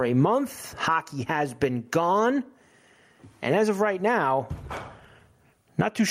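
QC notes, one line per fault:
throughout: gain pumping, likely from input gain set far too high with a fast limiter clamping each loud burst, so the level swings by around 20 dB.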